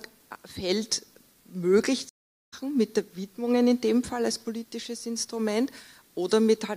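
At 2.09 s a stream reconnect cuts the audio to silence for 0.43 s. The connection dropped and a new decoder joined mid-stream, so at 2.54 s the sound resumes roughly 0.4 s further on. Unlike a buffer underrun, which picks up where it stopped, this skips material.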